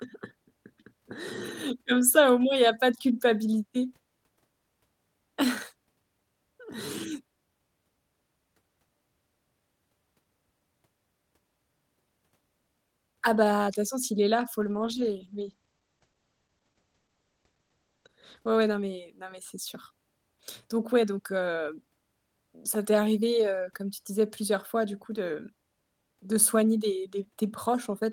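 Call bitrate drop, 14.61 to 19.17 s: the encoder was starved of bits, consistent with roughly 32 falling to 12 kbps. For about 3.5 s the speech turns coarse and muffled, with high frequencies cut above 8 kHz.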